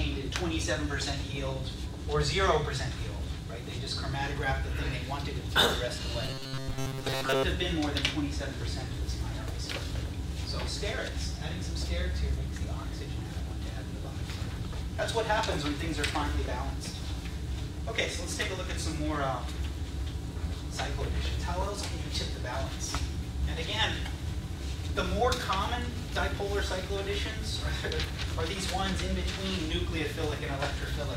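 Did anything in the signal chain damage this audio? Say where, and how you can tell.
Yes. From 6.23 to 7.45 s there is robotic sound from repeated short buffers. A starved driver or buffer stage likely replays its last 7.5 ms block for most of that stretch, forcing a rigid 134 Hz buzz. A spectrogram shows flat, evenly spaced harmonics, and the waveform shows identical repeating cycles.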